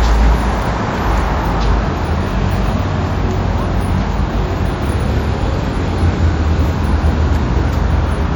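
From start to finish the sound carries a watery, swirling texture with metallic chirps on bright, noisy content and softened attacks, plainly audible throughout, most likely from MP3 compression at a low bitrate, which fits roughly 64 kbps. The encoder has left weak high-frequency detail flickering on and off between frames. That flickering swirl is what sets it apart from a plain low-pass filter, which would dull the top end but stay smooth and steady.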